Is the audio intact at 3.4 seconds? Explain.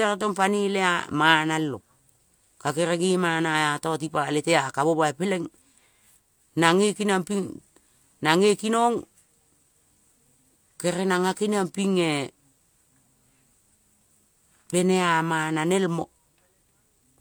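Yes, the speech at 3.4 seconds plays through intact, with no dropout, click, distortion or other fault at that moment.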